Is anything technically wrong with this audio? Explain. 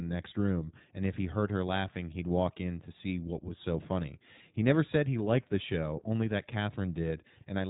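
Yes. The iLBC codec runs throughout. It codes each short frame's excitation independently at narrowband, so nothing above 3.8 kHz survives. The speech sounds muffled and plainly rough, slightly synthetic, and the damage points to roughly 15 kbps with 20 ms frames.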